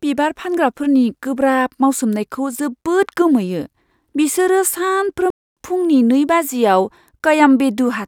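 At 5.30 s the speech cuts out abruptly and stays silent until 5.57 s. That gap of about 264 ms is a playback stall. The silence lands in mid-flow, not at a natural pause. The player was likely starved of data or had its output thread blocked. Nothing reached the output during that time. When sound returns, it resumes. The break is long enough to be clearly heard as a hitch.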